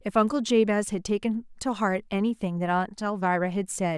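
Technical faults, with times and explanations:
No technical faults are audible in this speech.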